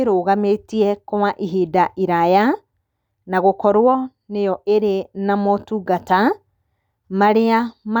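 No technical faults can be heard anywhere in this speech recording. Nothing in the audio calls for a timestamp or a closer look.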